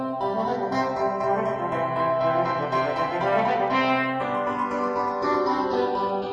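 From start to finish the two channels are drifting apart. They appear to run on separate clocks roughly 70 ppm apart, so the inter-channel delay grows to around 0.3 ms by the end. Summed to mono, this produces a slow flanging sweep. A spectrogram would show comb-filter notches sliding downward across the band, the lowest reaching about 1.7 kHz. Overlaid channel waveforms would show a small but steadily widening offset.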